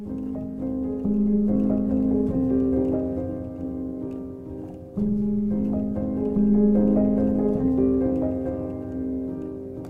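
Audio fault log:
Throughout: overlap-add ripple. The level swells and dips by about 6 dB at a rate of around 200 times per second, giving the sound a metallic buzz with extra tones around each note. The audio was split into short windowed frames and joined back together with an overlap whose windows don't add up to a steady gain, so each frame boundary leaves a dip. A rate that high points to a frame hop of roughly 5 ms.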